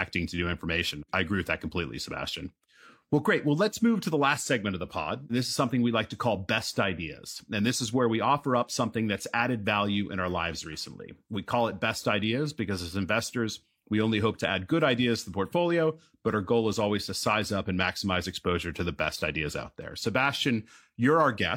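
Nothing goes wrong anywhere in this speech recording, so there's no technical fault to point to at any moment.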